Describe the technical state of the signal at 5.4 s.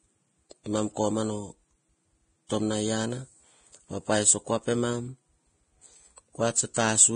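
At 5.4 s the speech carries heavy Vorbis compression damage, present across the whole clip. Nothing sounds above 9.7 kHz, and the remaining treble is quantised so coarsely that detail turns to grainy hiss, likely from a low-bitrate encode near 23 kbps.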